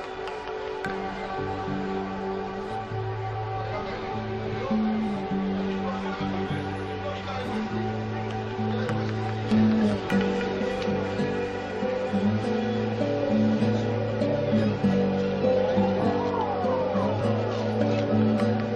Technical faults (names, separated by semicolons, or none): compressed frames skipped